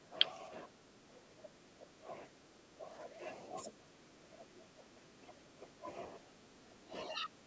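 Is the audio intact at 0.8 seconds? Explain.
No. From 0.0 to 2.09 s the speech dips by up to roughly 15 dB, likely speech suppressed in double talk: the echo canceller ducks it, showing as a shrunken waveform.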